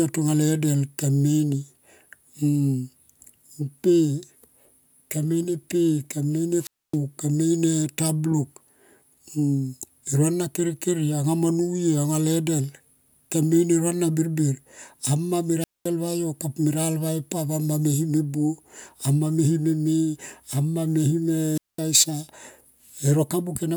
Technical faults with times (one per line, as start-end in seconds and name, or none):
6.60-6.98 wireless microphone squelch dropout
15.59-15.88 wireless microphone squelch dropout
21.54-21.80 wireless microphone squelch dropout